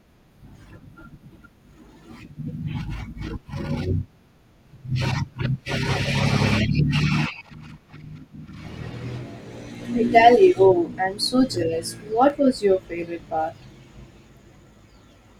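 From 0.70 s to 15.2 s, a regular click punctuates the speech roughly every 0.73 s, about twenty in all, like a metronome ticking under the talker. This steady pattern is most likely clock drift buffer slips: two devices running on separate clocks disagree by something around 300 ppm, so the buffer between them gradually drifts until a few samples are dropped or repeated at each slip. That small discontinuity is the click.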